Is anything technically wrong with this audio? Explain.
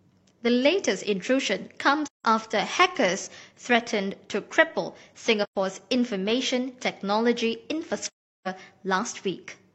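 Yes. The speech has three gaps from AAC frame loss with muting: 2.06 to 2.24 s, 5.43 to 5.56 s, and 8.08 to 8.48 s, the last being the longest. When AAC frames are lost, the decoder replaces their spectrum with zeros. The overlapping transform windows then fade the audio out and back in, producing soft-edged holes rather than hard cuts. The durations fit roughly four, three and nine missing frames. On a spectrogram each gap appears as a full-band blank column with tapered sides. On the waveform the envelope slopes down to a flat line and then rises again.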